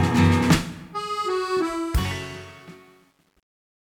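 From 1.6 s to the end, the fade-out shows truncation distortion. The fade stage keeps too few bits, which fits a 10-bit path, and adds no dither. From 2.28 s the low tail turns grainy.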